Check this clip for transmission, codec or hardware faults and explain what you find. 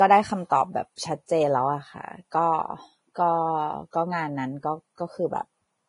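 There's one problem here, and it runs through the whole speech clip: heavy Vorbis compression is the likely culprit. Nothing comes through above about 10.6 kHz, so the top is sliced off cleanly. Below that, the encoder has kept the broad spectral shape but quantised the upper detail so coarsely that it turns into hiss of roughly the same energy. That leaves the speech grainy and hissy, with smeared consonant onsets, and points to a low bitrate, around 28 kbps.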